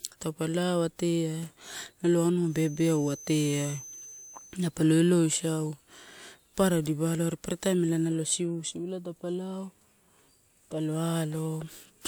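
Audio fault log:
2.42–4.63 s, feedback whistle: a thin, steady tone at 6.2 kHz sits behind the speech, roughly 20 dB under it and wavering a little in level. Likely the speaker-to-mic loop is hovering right at the feedback point, ringing on one frequency without running away.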